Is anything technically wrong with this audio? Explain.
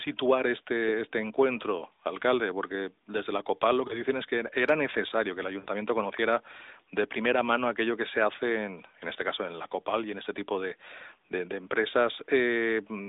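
Yes, there are lost AMR speech frames, at 3.88 to 4.02 s and 5.60 to 5.68 s. Corrupted frames were discarded, and the decoder filled the gaps by repeating the last good pitch and vocal tract settings at falling gain. The first dip is brief, with a short warble that fits one lost 20 ms frame. The second is longer and fits about three frames (60 ms), so the speech smears and fades before recovering rough. On a spectrogram each shows repeated, blurred harmonics fading within the 300 to 3700 Hz narrowband mobile line; the waveform shows a decaying envelope.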